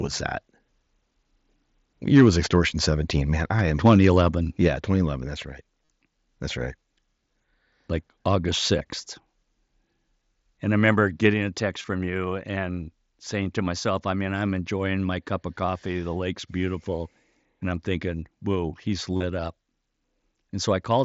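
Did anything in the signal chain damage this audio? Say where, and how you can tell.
Yes. Three kinds of damage can be heard, at the converter, in call processing, and on the Bluetooth link.

Microphone overload appears at 2.14 to 2.29 s and again at 3.85 to 4.07 s, right after "I am". Those peaks push about 3 dB and about 4 dB past full scale, and a fair share of samples sits pinned at the limit, giving a harsh crackle. The waveform shows flat-topped peaks, and the spectrogram shows broadband smearing over the harmonics. The likely cause is input gain set too hot at the converter.

The microphone volume is stepped down twice. At 4.68 s the whole signal, background included, drops about 4 dB in a single step, shortly after the second clipped burst. At 11.34 s, between "I remember" and "a text from you", it falls about 3 dB. On the waveform the envelope shows a clean stair-step, and the spectrogram's noise floor darkens at the same instant. 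This is likely the call software's gain control reacting to the overload.

Concealed Bluetooth headset packet loss occurs at 5.85 to 5.88 s (37.5 ms) and 11.82 to 11.84 s (22.5 ms). After "I'm thinking whoa he's", losses are scattered across 19.17 to 19.23 s, with a longest run of 37.5 ms. Each gap is filled by repeating a recent stretch of waveform, which gives a brief buzzy, held tone and a slight warble on recovery. On the spectrogram this shows as stiff, repeated harmonic striping. The lengths fit runs of 7.5 ms mSBC frames. The mSBC codec itself adds only light graininess.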